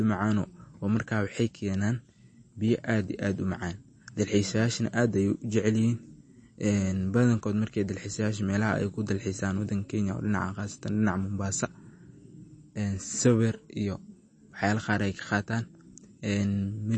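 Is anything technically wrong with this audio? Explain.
Yes. Throughout the speech there is plainly audible damage that sounds like MP3 compression, likely from a low-bitrate encode, one that fits roughly 32 kbps. Nothing is present above about 8.3 kHz, so the top end is cut off flat. Starved of bits, the encoder drops the treble and zeroes weak frequency lines, which flicker on and off between frames. The result is a watery, swirling texture, with metallic chirps on s sounds and smeared consonant attacks.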